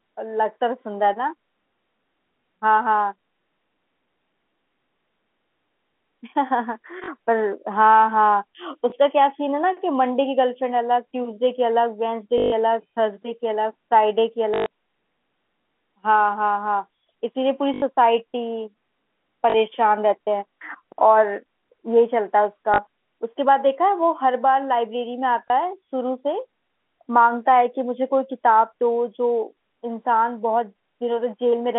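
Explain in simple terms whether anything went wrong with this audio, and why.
Packet loss with last packet repeated happens eight times: 7.04, 8.9, 12.38, 14.54, 17.74, 19.5, 22.74 and 25.48 s. Pieces of the speech went missing. The last piece was replayed to fill each gap. That makes robotic stutters and small blips lasting 20 to 140 ms.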